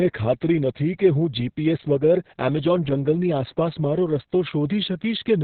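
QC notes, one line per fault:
Throughout: Opus voice compression, and it's heavy. Nothing gets through above about 4.3 kHz, so the speech is muffled and boxy, the narrowband limit the codec falls back to when it's starved of bits. The hoarse, slightly robotic edge comes from the linear-prediction coder rendering the excitation very coarsely. All of that fits the SILK mode at a very low rate, around 6 kbps, probably with long 60 ms frames.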